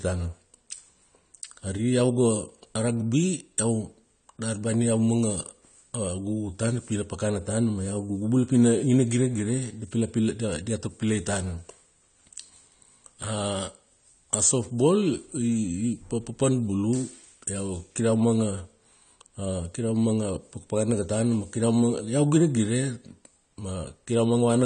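Throughout, the speech sounds dull and smeared, with nothing above 9 kHz, which points to AAC compression at a low bitrate, likely AAC-LC around 32 kbps.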